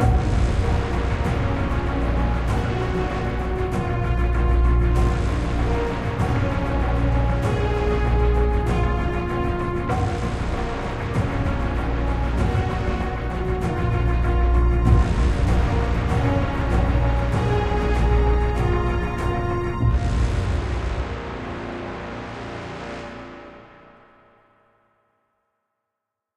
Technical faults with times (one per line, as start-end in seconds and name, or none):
none